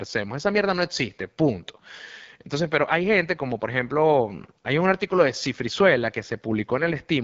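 Throughout, the speech has passed through the AMR wideband (HD Voice) codec at a low setting, with roughness that points to a rate around 8.85 kbit/s, one of its two lowest. At that rate the pulse-driven vocal tract model has too few bits to rebuild the voice faithfully, so the speech comes out plainly rough and raspy. Nothing is present above about 7.6 kHz, and the top band carries only shaped noise in place of real detail.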